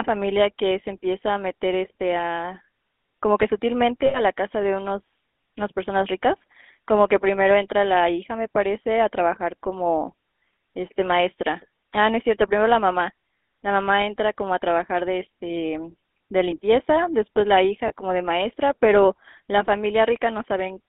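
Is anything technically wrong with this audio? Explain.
Yes. GSM full-rate codec damage runs throughout: the speech is rebuilt from a vocal-tract model driven by sparse pulses within roughly a 200 Hz to 3.6 kHz band, giving a buzzy, gravelly roughness that fits a 13 kbps full-rate encoding. Lost GSM frames occur at 4.06 to 4.19 s (80 ms) and at 17.88 s (20 ms); the last good frame is repeated, so the sound briefly holds as a rough, metallic ring.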